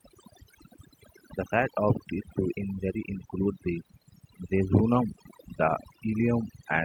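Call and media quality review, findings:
Overdone noise removal, throughout. Background pushed down and broken up with twinkling specks. Noise suppressor set too aggressive, gating individual frequency bands near its noise estimate and taking low-level voice detail down with them.

Clock drift between sender and receiver, throughout. Sender clock running roughly 4% fast relative to receiver. Jitter buffer steadily overfilling, so the receiver has to discard audio to keep latency bounded. Small timing hiccups recur across the clip at uneven intervals.

Repeated timing corrections, 0.02 to 6.68 s. Receiver trimming short segments, all in the same direction, for an effective playback rate of 105%. Unevenly spaced edits heard, if at all, as slight hiccups or a slightly unsteady tempo. Jitter buffer compensating for the fast sender clock.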